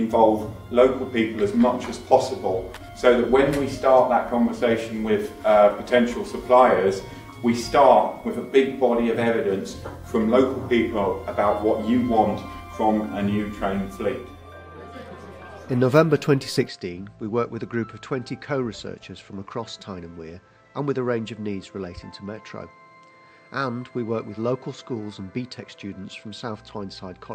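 At 16.68 s the sound abruptly goes duller and a bit boxier, with no gap at the changeover, and stays that way to the end. Everything above about 8.4 kHz is gone, the level drops by roughly 5 dB, and a faint new background hiss comes in well under the signal. That's most likely the input switched to a poorer device mid-recording, with a narrower-band mic bringing its own tone and noise.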